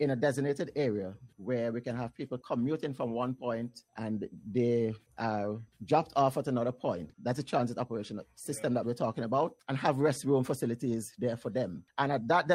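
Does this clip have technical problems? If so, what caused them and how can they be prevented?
No, nothing in the recording points to a technical fault at any point, so there is nothing here that needs preventing.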